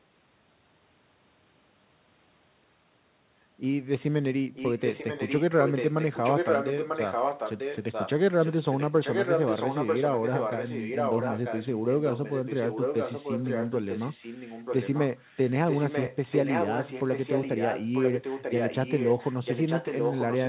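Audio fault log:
4.54–5.43 s, 5.62–8.11 s, 8.38–8.51 s, 8.68–15.01 s, 15.18–15.51 s and 15.68–20.49 s: echo leak. A second copy of the speech trails the original by about 0.94 s. It is sometimes nearly as loud as the original and sometimes faint. It is likely a loudspeaker's output that the far end's echo canceller failed to remove. Unlike room reverberation, it is a distinct, repeated copy rather than a smeared tail.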